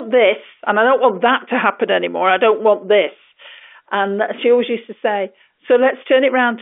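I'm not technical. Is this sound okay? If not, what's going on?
Yes, nothing has gone wrong in this recording. It has the narrow, slightly boxy sound of an ordinary landline call, because it went through standard telephone coding, which only carries sound from about 300 Hz up to 3.5 kHz.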